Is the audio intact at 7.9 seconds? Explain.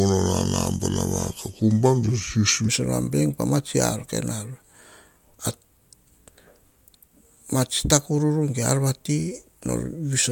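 Yes, at 7.9 seconds the audio is intact, with no audible fault.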